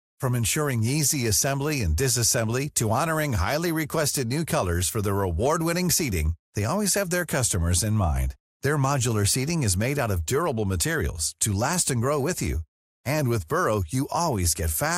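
Across the whole speech clip the sound is dull and carries a gurgling, granular distortion. This is MP2 compression damage, and it is plainly audible. The likely cause is MPEG Layer II coding at a low rate, around 80 kbps. The coder splits the signal into sub-bands and shares out bits. Here there are too few bits. Upper bands drop out and flicker back, and the remaining bands are coarsely quantised.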